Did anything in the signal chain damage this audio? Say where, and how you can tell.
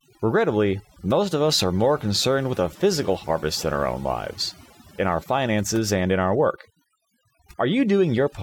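Yes: overdone noise removal in the processing stage, running throughout, leaves near-silent gaps with twinkling specks; the spectrogram shows bins blanked into scattered isolated dots.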